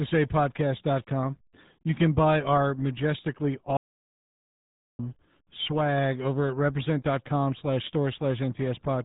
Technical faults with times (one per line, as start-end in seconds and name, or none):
0.00-9.05 RealAudio 14.4 codec
3.77-4.99 audio dropout to silence